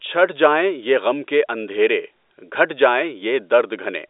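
No technical faults can be heard in this speech.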